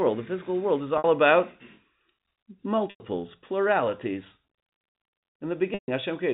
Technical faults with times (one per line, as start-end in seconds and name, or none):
0.98-1.04 packet loss with pitch repetition
2.90-3.00 packet loss with pitch repetition
5.74-5.88 packet loss with pitch repetition